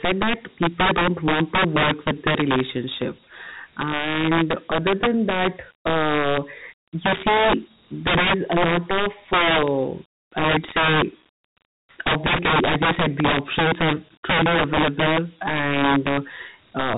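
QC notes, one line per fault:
throughout: integer overflow. The gain drives the speech about 15 dB past full scale, and around 7 percent of samples go over. Those samples are not held at the ceiling. They wrap around to the opposite extreme. Each loud peak jumps across the whole range in one step. That sudden leap is heard as a harsh crack on the loud peaks. It is far sharper and more violent than ordinary clipping, which only flattens the tops.
throughout: Dialogic VOX ADPCM. The speech is coded as Dialogic (OKI) ADPCM, and the damage is plainly audible. Nothing is present above 3.8 kHz, so the sound is narrow and telephone-like. That ceiling fits 4-bit samples at 8,000 a second, about 32 kbps. Each sample stores only a coarse step from the last one. The predictor cannot track fast detail, so a gritty hiss rides along with the speech.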